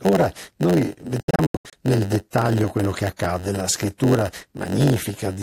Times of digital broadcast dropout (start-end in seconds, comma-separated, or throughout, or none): 1.20-1.73